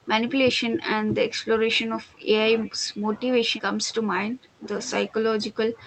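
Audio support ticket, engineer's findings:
Speech suppressed in double talk: level ducks about 15 to 20 dB at 0–1.45, 1.85–2.28, 2.62–3.02, 3.43–4.66, 5.08–end. Likely the echo canceller clamping down while far end talks. Call codec top end sounds capped near 8 kHz, consistent with Opus around 32 kbps.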